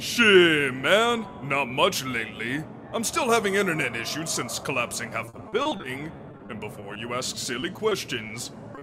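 From 5.25 to 6.97 s, and again from 7.35 to 8.31 s, there is repeated packet loss with a robotic sound. Fourteen gaps of up to 40 ms in the first stretch, then five gaps of up to 20 ms, are each bridged by extending the preceding sound. The result is choppy. On a spectrogram, smeared, flattened harmonic patches alternate with notches where material is simply missing.

Right at the end come two short concealed packet losses, at 8.75 to 8.79 s and 8.79 to 8.83 s. Each hole is patched with about 20 ms of continued sound and then blended back in, which is heard as a brief smear or wobble.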